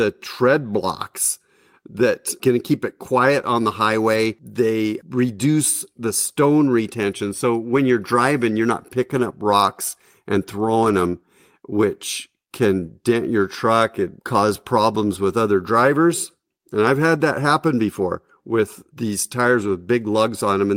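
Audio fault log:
4.13 to 19.71 s, lost packet rebuilt from error correction: brief rough, noisy patches at 4.13–4.15, 7.71–7.77 (before "you're driving you're not"), 9.15–9.29, 10.83–11.09 (between "rocks and" and "which can"), 13.09–13.15 and 19.61–19.71 s (after "happen before with these"). They last 20 to 140 ms. The decoder played the low-bitrate copy carried in the following packet, so there is no gap, only coarser sound.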